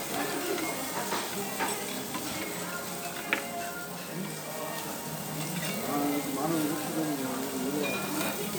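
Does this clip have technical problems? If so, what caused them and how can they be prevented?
No technical faults are audible.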